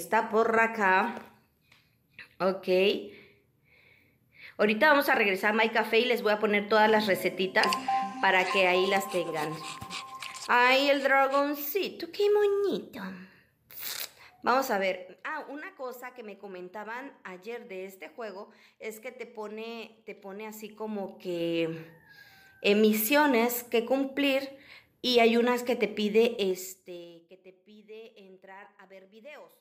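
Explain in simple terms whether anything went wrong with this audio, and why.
Zipper noise appears three times: from 14.44 to 15.48 s as the sound is turned down, from 20.44 to 21.84 s as it is turned back up, and from 26.32 to 27.28 s during a deeper fade-down. Instead of gliding, the volume moves in small jumps, several per second and faster in the last fade. Each jump leaves a tiny click, so the sound ticks or zips while the level changes.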